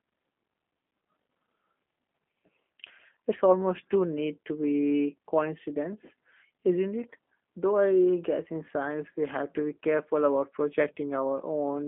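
From start to finish the speech has passed through a G.729 codec, which fits an 8 kbit/s VoIP path. Rather than sending the waveform, the encoder keeps only a vocal tract filter, a pitch predictor and a few pulses per frame, and the line passes only about 200 Hz to 3.5 kHz, with nothing above 3.6 kHz. The result is muffled, band-limited speech with a plainly audible rough, synthetic buzz.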